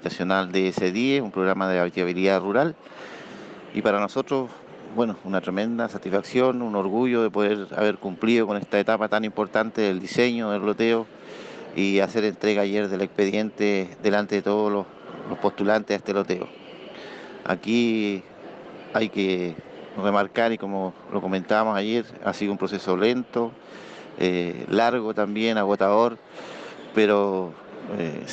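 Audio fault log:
No faults detected in this recording.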